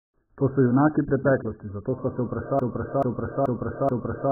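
AAC compression, from start to finish: the speech is dull and smeared, with nothing above 1.8 kHz and a warbling, fizzy texture on sustained sounds. The heavy damage likely comes from AAC-LC at a very low bitrate, which fits roughly 9 kbps, where the encoder drops high bands and quantises the rest coarsely.

Broken-record loop, from 2.59 s to the end: a 0.43 s fragment repeats exactly, four times back to back, and the audio that belonged there is lost. The likely cause is a stalled player, encoder or stream that kept resending its last buffered piece.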